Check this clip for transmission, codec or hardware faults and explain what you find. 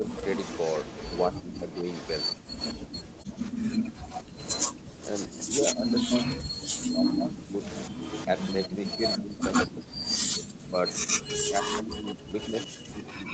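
Two faults run through the clip: repeated dips in the speech level, and a delayed second copy of the voice lying under it from start to finish. The band stops at 8 kHz, consistent with the Opus call path and microphone processing, so the missing top end is not part of either fault.

Speech suppressed in double talk: The speech sinks and breaks up in patches from 0.00 to 0.06 s, 1.33 to 1.85 s, 5.48 to 7.58 s, 8.27 to 9.85 s, and again from 10.69 s to the end. The first dip is shallow, about 10 dB. The later ones reach about 20 dB, and the passage around 5.5 to 7.6 s loses roughly a second of level in total. The likely cause is an echo canceller that cannot tell the talker apart from the far side's loudspeaker echo while both are active, so it turns everything down.

Echo leak: From 0.06 s onward a ghost of the voice trails the original by 118 ms, only about 5 dB quieter, which makes the speech sound doubled. 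This likely comes from a loudspeaker endpoint whose echo canceller left part of the microphone pickup in place and sent that residue back down the line.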